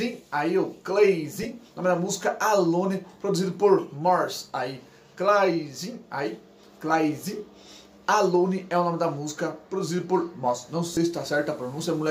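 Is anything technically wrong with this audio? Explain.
Yes. Lost LE Audio frames appear at 1.43–1.45 s and 10.94–10.97 s (20 and 30 ms). The LC3 decoder refills each with the previous spectrum, randomly signed, leaving a brief noisy smear.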